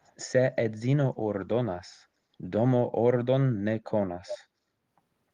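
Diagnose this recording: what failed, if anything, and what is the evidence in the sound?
Echo leak, in call processing. Delayed copies appear at 0.03 s and 4.28 s, the second far louder. Both trail by 0.3 s, likely loudspeaker pickup escaping the canceller.

Call bitrate drop, in the codec. From 0.98 to 3.03 s the audio turns rough and muffled. The encoder fell from 32 to 18 kbps, coding coarsely.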